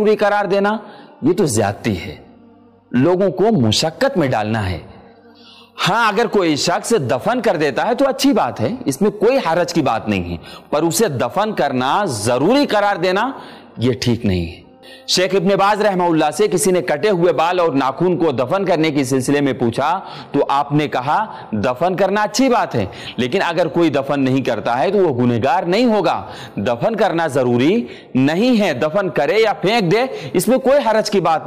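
There are no technical faults in this audio to describe.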